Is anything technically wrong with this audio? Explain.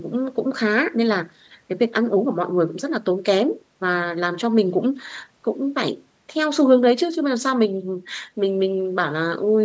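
No, nothing stood out as a technical problem on listening to this speech clip, which has the normal sound of call microphone processing with no content above 8 kHz.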